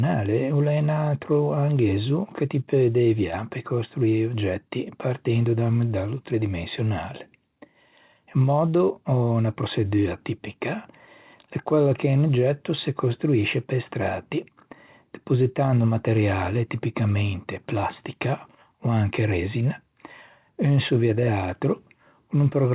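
No technical faults are audible.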